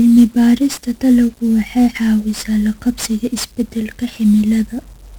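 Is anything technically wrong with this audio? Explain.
Yes, the whole clip has been run through 1-bit DFPWM compression, and it's fairly heavily damaged from start to finish. Each sample is reduced to a single bit that just nudges an adaptive level up or down, so the speech rides on a thick bed of broadband quantisation noise. The result is fuzzy and crackly throughout, with the top end swamped by hiss. That degree of grit fits a very low rate, roughly 48 kbps.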